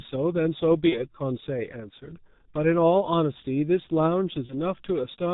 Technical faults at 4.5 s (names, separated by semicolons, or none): G.723.1 codec; VoIP packet loss concealed by the speech codec